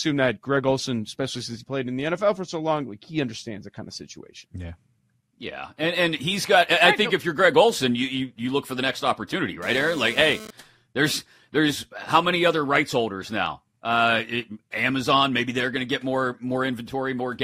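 Speech, with a GSM phone buzz from 9.62 to 10.51 s, right after "for the next opportunity": a raspy 217 Hz burst about 16 dB down, from a nearby 2G phone sending data.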